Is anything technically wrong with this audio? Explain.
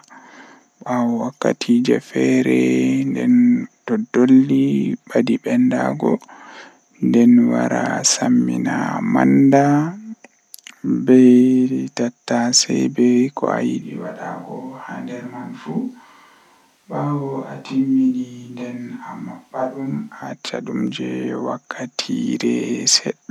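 Yes. From 13.82 s to 20.22 s there is a switch to a distant microphone: the close microphone's feed likely dropped out, leaving only a pickup farther from the talker. The speech turns suddenly roomy and hollow, loses its low end, and falls roughly 10 dB in level, while the room's background noise, about 35 dB below the speech, becomes more noticeable. At 20.22 s the close, fuller sound returns just as abruptly.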